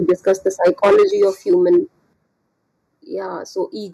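Channel delay (comb filtering) runs through the whole speech recording. One channel lags the other by a fraction of a millisecond, and summing them to mono cancels shared content at evenly spaced frequencies. The first notch sits around 3 kHz, which leaves the sound hollow and phasey.

Microphone overload is heard from 0.08 to 1.78 s as a harsh, crackling edge on the loudest peaks. The peaks run about 9 dB past the converter's limit and roughly 7 percent of samples are flattened, most likely because the microphone's input volume was set too high for the converter.

Microphone volume stepped down appears as sudden level drops at 0.1 s (about 2 dB), 1.11 s (about 5 dB) and 2.13 s (about 8 dB). Voice and background fall together, likely because the call software reacted to the clipping by lowering the device's input gain in single steps.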